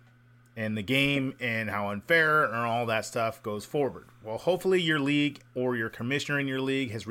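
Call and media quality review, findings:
Faint chirping warble, 2.21–5.01 s, after "the game and how" until "league or your". Timecode bleed: LTC square wave alternating near 1 and 2 kHz, about 40 dB down, fitting 29.97 fps code.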